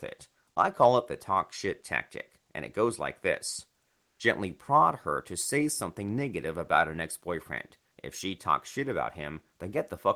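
At 3.97–4.15 s, after "it goes like this", comfort noise replaces the background: steady, featureless noise, slightly quieter, likely discontinuous transmission, not silence.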